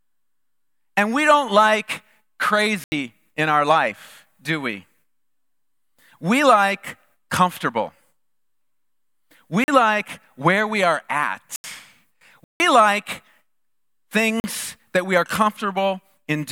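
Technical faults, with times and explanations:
2.84–14.44 s: block of digital silence. There are five zeroed blocks, at 2.84 s (80 ms), 9.64 s (40 ms), 11.56 s (80 ms), 12.44 s (160 ms) and 14.40 s (40 ms). The audio cuts out and back without a fade. The gaps sound like brief holes, which points to the output buffer not being filled in time.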